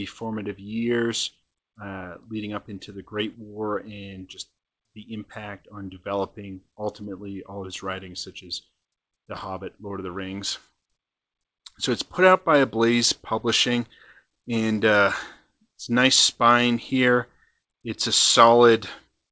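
Nothing is technically wrong with this audio, which comes through a call path that leaves no content above 8 kHz.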